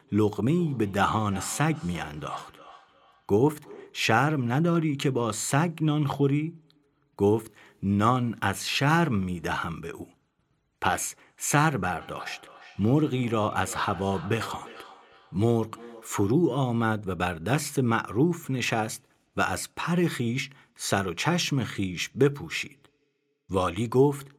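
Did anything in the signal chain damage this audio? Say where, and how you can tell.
Yes, at the call-processing stage: feedback echo between two devices, from 0.58 to 4.08 s and again from 12.01 to 16.3 s. In both spans the speech returns at a steady interval of roughly 0.3 s, peaking at about 20 dB below the direct speech. A second device in the room plays the far-end audio into the microphone, and the echo canceller ignores it because it only subtracts its own device's playback.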